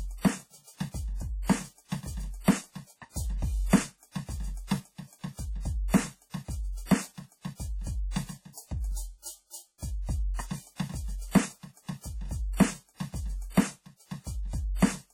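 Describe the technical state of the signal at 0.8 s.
At 0.8 s the music carries the same heavy codec damage heard across the whole clip. Transients ring and smear, the texture sounds washy, and a hiss swells and recedes with the signal level. Nothing sounds above about 17.7 kHz. This is likely WMA compression at a low bitrate, around 32 kbps. Long transform blocks spread quantisation noise over tens of milliseconds, and quieter spectral lines are dropped entirely.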